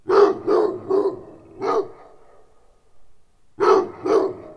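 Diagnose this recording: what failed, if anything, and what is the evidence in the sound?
Wrong sample rate at playback: throughout, the sound runs at about 0.69 speed and about 6.5 semitones lower, fitting 32 kHz audio played at 22 kHz. Unlike a pitch shift, tempo and pitch drop together.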